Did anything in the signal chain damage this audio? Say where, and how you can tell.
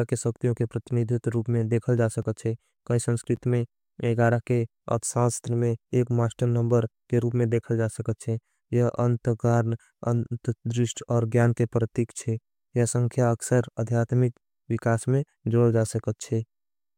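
Yes. Two blocks of digital silence point to the driver or buffer stage: a 3 ms gap at 2.22 s, between "रूप में देखल जा" and "छे कहीं", and a 10 ms gap at 3.36 s, after "छे कहीं". The sound cuts out and back with no fade, and both gaps are short enough to be heard as a tick or dip rather than silence, because the output buffer was not filled in time.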